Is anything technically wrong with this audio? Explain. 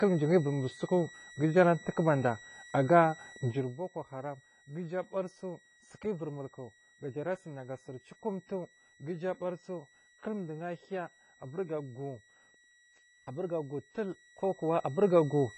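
Yes. Three faults can be heard.

A switching supply whistle runs through the whole clip. It is a thin, steady tone near 1.9 kHz, wandering slightly between about 1.92 and 1.94 kHz. It sits roughly 25 dB below the speech. A nearby switching power supply is running in an audible burst mode or beating with another supply, so the resulting tone falls inside the hearing range. It leaks into the audio as a high whistle over the speech.

The whole clip also has a dull, smeared quality. Nothing is present above 10 kHz. Sibilants turn fizzy and sustained sounds warble. This is likely AAC compression at a low bitrate, around 24 kbps. The encoder quantises each frame's frequency lines coarsely. It drops the top of the spectrum and leaves gaps or substitute noise in the bands it keeps. The damage is plainly audible.

Zipper noise appears from 3.44 to 3.8 s, just after "ara tuwaku bada aga" and before "haram ga uju abarisu". 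The level drops by roughly 15 dB in 1 dB jumps, at about 50 steps per second. Nothing smooths between the jumps, so each one puts a small click into the waveform. Together they make a rapid ticking zip that rides on the speech while the level falls.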